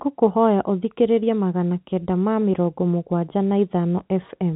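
No technical faults occur anywhere in this speech clip, which carries the band-limited sound of G.711 telephone coding.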